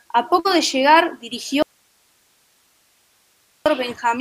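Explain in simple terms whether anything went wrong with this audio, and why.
Two things go wrong. At 0.39 s there is a burst of packet loss. Data was lost or arrived too late, so the last sound is briefly held and faded out, then skips ahead.

From 1.62 to 3.66 s the sound abruptly vanishes, leaving only faint hiss. This is likely an audio dropout to a faint residue.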